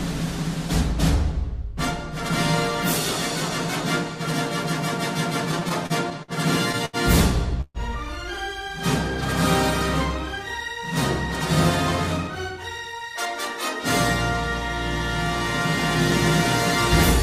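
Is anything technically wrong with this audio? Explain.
Yes. The audio has a cluster of network-timing faults: stalls where the jitter buffer runs dry, followed later by two stretches where it catches up by playing faster.

From 5.51 to 6.31 s there are repeated stalls (stutter). Packets reached the receiver too slowly, so the jitter buffer emptied six times. Each time, the receiver extended the preceding sound to bridge the wait. Together these fills add 128 ms, about 16% of that span, and the longest single gap is 53 ms. Nothing is lost, but the sound drags and hiccups. On a spectrogram it shows as a run of short, smeared, repeated slices. The waveform shows brief looped segments, with the longer ones tapering in level.

At 6.85 to 6.96 s there is a short stall from a late packet. One packet arrived 79 ms behind schedule, and the receiver held the last sound for that long before resuming exactly where it left off. 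You hear a single sound lingering too long, with a faint buzz or dip. On a spectrogram the harmonics run flat and horizontal for about 79 ms. The waveform shows a periodic, repeated stretch with slightly sagging amplitude.

From 7.61 to 7.78 s there is a call audio freeze. The sound hangs as a buzzy continuation of the last moment, fades, and drops to silence for about 40 ms before resuming from where it stopped. Altogether 132 ms has been inserted and nothing is missing. The cause is likely packets being held up in transit, leaving the buffer empty. The spectrogram shows a frozen, blurred band fading into a blank column. The waveform decays into a flat line, then resumes abruptly.

Two jitter buffer speed-ups follow, at 10.40 to 10.85 s running at 107% speed and at 12.27 to 12.86 s at 111%. After the earlier delays the buffer held more audio than it aims for. To trim that excess, the receiver repeatedly cut out pitch-period-sized pieces, roughly 40 ms in the first stretch and 70 ms in the second. 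The sound runs hurried while keeping its pitch. On a spectrogram, events arrive closer together while harmonic spacing stays the same. The waveform shows compressed timing with occasional small splice discontinuities.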